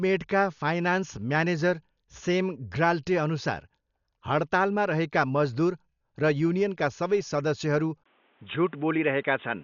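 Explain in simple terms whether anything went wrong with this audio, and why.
Throughout the speech, the sound is dull, with nothing above 6.9 kHz and a rough, fluttering grain. That points to heavy Dolby Digital compression, likely a low-quality encode that dropped the upper range and filled gaps with noise.

At 8.04 s, just after "सबै सदस्यहरू", a brief 20 ms gap is followed by a boxier sound cut off above 3.8 kHz, with faint new background noise and similar loudness until the end. This is likely an input switched to a poorer device.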